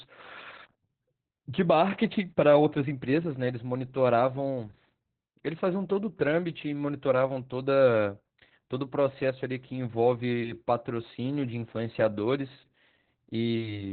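Across the entire clip, Opus voice compression leaves the speech narrowband, with nothing above about 4.4 kHz. The coarse excitation coding makes the speech sound muffled, hoarse and slightly robotic. This heavy damage fits SILK mode at roughly 8 kbps.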